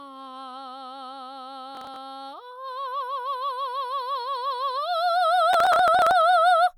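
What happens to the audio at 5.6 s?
A gritty burst of crackle tears through the music from 5.53 to 6.21 s, with tiny hard-edged skips. This is processor overload crackle: the processor misses roughly twenty buffer deadlines over this stretch, each skipped buffer leaving a gap, which fits buffers of about 5 ms.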